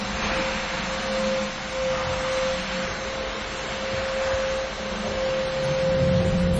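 From start to end, the audio carries heavy damage that likely comes from MP3 compression. Nothing remains above 11.4 kHz, so the top end sounds dull and cut off. The encoder was starved of bits, which fits a low rate near 32 kbps. Weak frequency lines drop in and out between frames. That gives the sound a watery, swirling texture with metallic chirps. Sharp attacks come out smeared rather than crisp.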